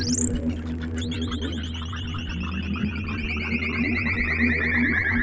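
Throughout the music, held notes and tails sink and pump by about 5 dB while attacks pass, the sign of a speech-tuned noise suppressor treating sustained sound as noise.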